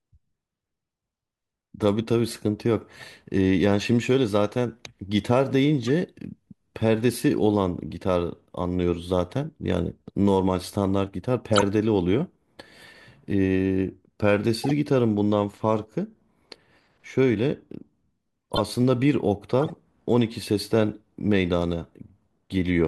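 Speech clip with six short bursts of corrupt frame decoding: 2.27 to 2.38 s, 5.86 to 5.89 s, 11.51 to 11.63 s, 14.64 to 14.71 s, 18.52 to 18.60 s and 19.60 to 19.70 s. Each one is a brief chirpy, noisy blip where damaged compressed frames were played anyway, so misread gains and codes throw energy into the wrong frequencies for a few frames. The one near 11.5 s is quite loud, and the one near 5.9 s is faint.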